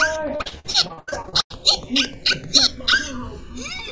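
Repeated packet loss (robotic sound) runs from 0.36 to 1.55 s: over a dozen holes, the longest about 97 ms, are each patched by extending the preceding sound, so nearly half that stretch is concealment and the audio turns choppy with pieces missing. Channels drifting apart throughout: the two sides run on clocks a few hundred ppm apart, so the inter-channel delay creeps to around a millisecond, and in mono the comb notches glide slowly, giving a flanging sweep. The audio stops at 8 kHz, which fits a G.722 call path at 64 kbps.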